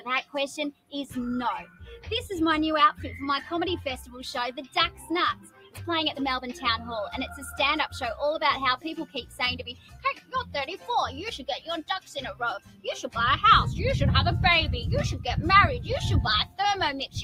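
Across the whole clip the level pumps and thins, with held sound and tails sinking while attacks come through, swinging by around 10 dB. A noise suppressor built for speech is still active and treats steady or fading material as noise. The sound is cut by the noise suppressor harder at 0.72 to 0.93 s, 1.64 to 2.07 s, 4.67 to 5.08 s, 5.34 to 5.78 s, 9.06 to 9.39 s, 9.7 to 10.53 s and 12.59 to 12.85 s. It drops by about 11 to 18 dB, most deeply at 0.72 s, because the suppressor misreads those stretches as noise.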